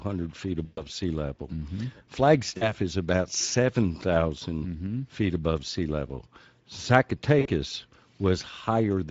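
Speex codec damage runs through the whole speech recording. The encoder has too few bits for the excitation signal, so voices come out hoarse and noisy with a grainy edge. The level of damage fits a middle Speex setting around 17 kbps.

VoIP packet loss concealed by the speech codec occurs at 0.65 to 0.87 s, 2.57 to 2.72 s and 7.39 to 7.48 s. At each gap the decoder stretches its last pitch and filter, so the speech smears into a buzzy tone or coloured noise that fades. The gaps fit about 120, 40 and 60 ms of lost audio.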